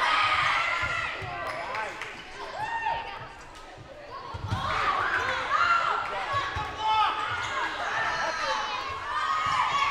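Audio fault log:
1.47 to 8.28 s, clock drift buffer slips: a click every 1.7 s, about five in all, each where a short block of samples gets skipped or repeated. That steady rhythm is likely two devices whose clocks disagree by roughly a tenth of a percent.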